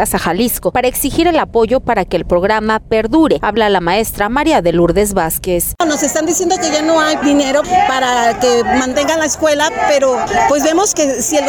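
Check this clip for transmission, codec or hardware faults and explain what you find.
No transmission, codec or hardware problems can be heard.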